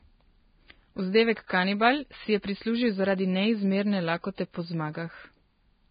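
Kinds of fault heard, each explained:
Vorbis compression: The clip is speech with nothing above 4.9 kHz, and the treble that remains is heavily roughened into grainy hiss. This likely comes from Vorbis coding at a low bitrate, which fits around 16 kbps, where fine detail is replaced by noise of similar energy.
Pre-echo: The codec spreads quantisation noise across a whole block, so an attack late in the block gets hiss ahead of it. Here a brief hiss precedes attacks at 1.47 to 1.49 s, and at 2.42 s, between "si je" and "prislužil zaradi".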